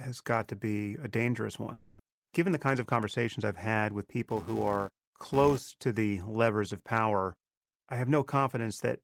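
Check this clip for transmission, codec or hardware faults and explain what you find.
Three faults are audible in this speech clip: a concealed gap, a hurried stretch, and a level-following buzz.

From 1.73 to 2.00 s, right after "to be a dangerous", the sound smears into a fading buzz for about 260 ms, with roughly 200 ms of speech skipped and a delay shift near 50 ms. This is likely a long network dropout. The concealment fades instead of going silent, and the speech resumes further on, which sets it apart from a brief single-packet glitch.

Between 2.55 and 3.39 s, a jitter buffer speed-up runs the speech about 6% fast. Short pitch-period pieces, around 50 ms in total, are cut to drain excess buffering. The pitch stays put, unlike a resampling error, where speed and pitch would rise together.

From 4.28 to 5.76 s, between "I've had with" and "to the levers of", a filter restarted on every block adds a 345 Hz buzz, which fits a 128-sample block. 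Each block starts with a small transient. Unlike mains hum, the buzz rises and falls with the speech level.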